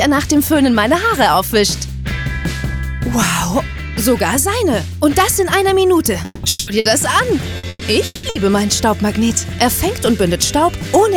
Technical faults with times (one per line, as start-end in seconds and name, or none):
6.25-6.70 long network dropout
6.79-6.88 burst of packet loss
7.57-8.38 repeated packet loss (robotic sound)